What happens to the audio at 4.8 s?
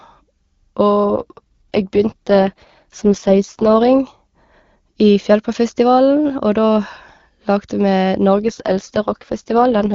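Nothing goes wrong at 4.8 s: the speech passes through intact there, carried by the AMR wideband (HD Voice) codec at a high rate without any audible fault.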